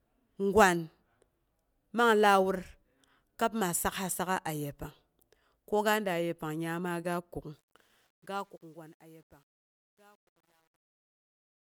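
From 7.53 s the speech fade-out shows truncation distortion, the kind expected from a stage holding about 10 bits without dither, and it turns gritty from 8.42 s to the end.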